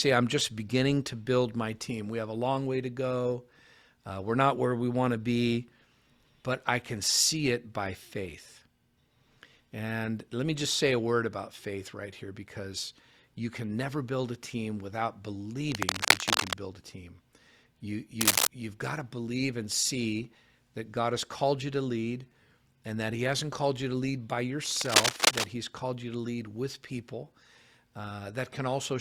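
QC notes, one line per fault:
15.72–16.53 s, 18.21–18.47 s, 24.66–25.47 s: cable scratch noise. Dense, irregular bursts of crackling rustle sit around 5 dB above the speech, first after "build a team without" and before "build a team", then just before "you've got to believe", then after "you to lead by". This is likely a worn cable or connector being moved, with its contact resistance jumping erratically and modulating the signal path into broadband scratching.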